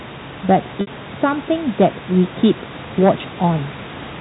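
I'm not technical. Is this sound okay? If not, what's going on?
No. At 0.81 to 0.87 s, a bit of the sound went missing in transit. That's packet loss with pitch repetition: the last tone is repeated, giving a brief held buzz.

From 1.80 to 2.51 s, and again at 3.03 to 3.10 s, the loudest parts are too big and get chopped flat. This is hard clipping, heard as crackle on the peaks.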